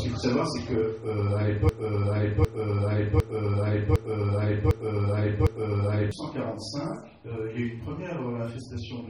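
From 1.69 to 6.11 s a broken-record loop repeats one 0.75 s fragment six times, each copy identical and at full level, unlike a decaying echo. The player or stream likely stalled and replayed its last buffer, so the audio for that span is lost.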